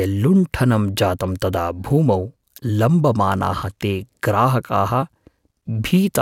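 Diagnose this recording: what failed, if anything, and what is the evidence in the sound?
Nothing failed: no stage from capture through playback leaves audible evidence of a fault anywhere in the speech.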